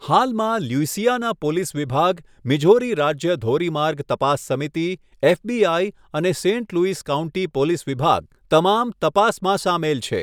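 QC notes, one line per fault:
No faults detected.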